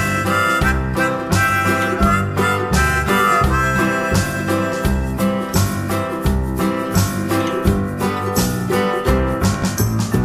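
Near the end, from 9.54 to 9.66 s, a loud pop lands as two sharp thumps in quick succession, peaking a few decibels above the surrounding sound. Unlike a dropout, the sound continues underneath. The likely cause is a voltage pulse from a plug, switch or static discharge.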